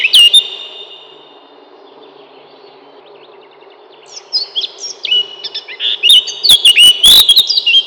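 Near the end, from 7.11 to 7.20 s, a violent crack tears through the loudest moments, far harsher than ordinary clipping. This is integer overflow: peaks reaching the top of the integer range wrap around to the opposite sign instead of being limited.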